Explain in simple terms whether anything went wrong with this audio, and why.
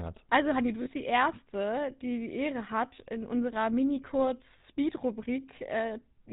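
Yes, a couple of things went wrong. The whole speech clip has gone through the GSM full-rate codec, the original digital mobile phone system. It squeezes the voice down by modelling the mouth and throat and driving that model with a coarse train of pulses. Everything above 4 kHz is thrown away, so the speech sounds muffled and phone-like, with a buzzy, gravelly grain that's plainly audible throughout.

There are also two short spots of lost GSM frames, where bits of the signal never arrived. The decoder patched each gap by repeating the last good chunk. Around 0.82 to 0.89 s you get a brief rough, metallic ring where the speech should continue, and a shorter one at about 4.58 to 4.61 s. Both are too brief to fade out completely.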